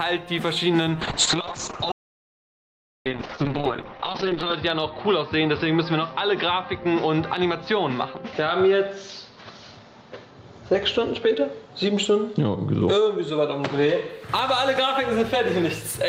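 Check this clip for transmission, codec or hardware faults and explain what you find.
Two faults are audible: a call bitrate drop and an audio dropout to silence.

From 1.02 s to 14.15 s there is a call bitrate drop. The encoder was starved of bits and coded coarsely. The top end falls from 20 kHz to 6 kHz, which fits a fall from 32 kbps to 7 kbps. The sound turns muffled and rough, worst for about 3.5 s.

From 1.92 s to 3.06 s there is an audio dropout to silence lasting about 1.14 s. The sound cuts out completely, with no room tone. The likely cause is lost input while silence kept being written. Whatever played then is gone.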